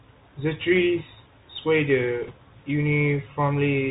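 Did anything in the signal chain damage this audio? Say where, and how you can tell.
Yes. The codec stage is the first problem. A Bluetooth CVSD headset codec is audible throughout. Nothing survives above 4 kHz. S sounds turn scratchy and a granular hiss sits under the speech. CVSD sends one up-or-down bit per sample, which fits a 64 kbps link. Its adaptive step can't track fast high-frequency detail.

The second problem is on the wireless link itself. Bit errors on a Bluetooth voice link appear from 2.23 to 2.32 s as a brief rushing crackle. There are no sharp clicks. Each flipped CVSD bit carries only a small step, and the error fades quickly. The density suggests an error rate of around one or two percent.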